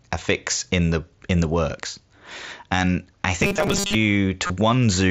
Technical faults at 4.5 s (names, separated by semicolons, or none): concealed Bluetooth headset packet loss